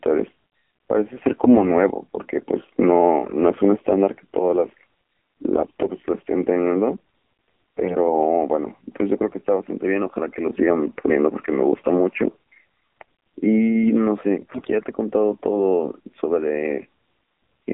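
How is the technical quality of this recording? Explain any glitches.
The recording has clear technical issues: it's been through a narrowband mobile codec for the whole clip, and there are four short bursts of corruption on top of that.

The AMR narrowband mobile codec runs throughout. AMR-NB rebuilds speech from a vocal-tract model driven by a handful of pulses per frame, so everything is confined to roughly 200 Hz to 3.5 kHz. The damage is plainly audible: the voice has that thin, buzzy, slightly synthetic phone quality, which fits a low mode around 7.4 kbps.

AMR bit errors hit at 1.32–1.62 s, 5.56–5.87 s, 7.77–7.97 s and 14.42–14.68 s. In each burst, a few percent of the weakly protected bits got flipped while the frames still passed their checksum, so the decoder played them anyway. The excitation pulses land in the wrong spots and the fine gain and spectral values drift. Pitch and level roughly hold, but the voice briefly goes hoarse, scratchy and gargly, across 15, 15, 7 and 13 frames in the four bursts.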